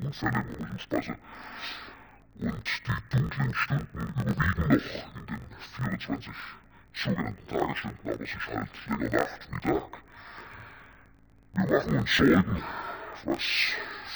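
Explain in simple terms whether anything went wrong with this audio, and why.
Something's off for the whole clip: interleaved audio read as planar. Each 21.77 ms chunk gets split into halves played together at half speed, so everything sits an octave low, sounds dull and robotic, and buzzes about 46 times a second.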